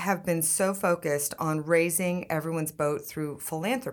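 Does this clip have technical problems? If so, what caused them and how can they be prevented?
No, there's nothing technically wrong to hear in this one, so there's nothing that needs preventing.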